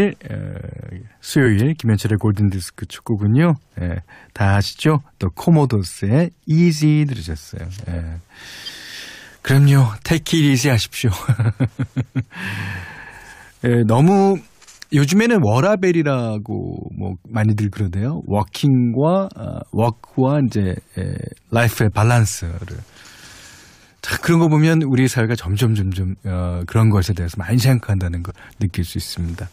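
Compressed frames skipped at 1.43 s, 8.65 s and 28.29 s in this speech: whole coded frames never reach the output, so the audio jumps ahead, by roughly 20 ms at the first two and about 70 ms at the last.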